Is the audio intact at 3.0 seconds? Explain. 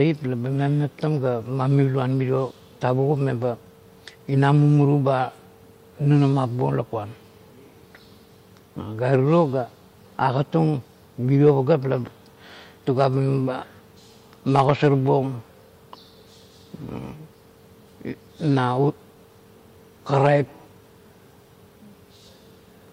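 Yes, the speech at 3.0 seconds is intact, with no dropout, click, distortion or other fault at that moment.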